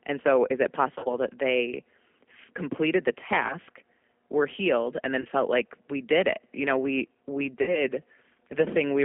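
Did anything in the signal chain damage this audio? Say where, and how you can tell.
Yes. The codec stage is the main culprit: the whole clip sits in a narrow 250 Hz to 3.4 kHz band and has that rough, slightly synthetic edge of a low-rate CELP coder, which fits G.729A at 8 kbit/s. Pitch and filter parameters are rebuilding the speech, not the waveform itself.

Then there's VoIP packet loss concealed by the speech codec, at the network stage. Right after "so is it", from 0.95 to 1.18 s and before "that they", the voice smears into a buzzy tone or coloured noise that fades, with several short gaps inside that stretch. It happens again after "completed the" at 3.47 to 3.55 s, at 5.21 to 5.28 s, and after "know we we" at 7.62 to 7.84 s. The decoder is stretching its last pitch and filter state, and the sound stays weak briefly after each hole.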